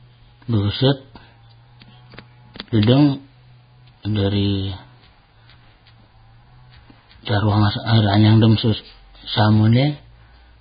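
Throughout the speech, nothing sounds above 4.9 kHz and the treble turns hissy and grainy, likely Vorbis compression at a rate that fits roughly 16 kbps.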